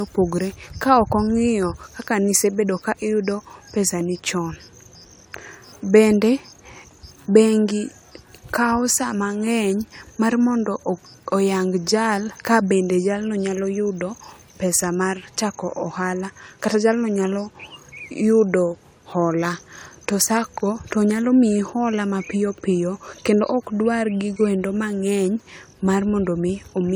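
Speech, with generation loss throughout. It sounds swirly, hollow and smeared, and attacks blur. The likely cause is about four lossy re-encodes, fitting AAC-LC at 96 kbit/s.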